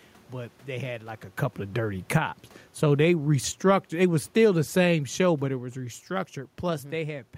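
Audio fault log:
2.0–7.13 s, automatic gain falling: from just after "like a couple of", the level sinks steadily by about 9 dB as the gain control, having judged the input too loud or its background noise too strong, winds its gain down, so the room noise drops along with the speech.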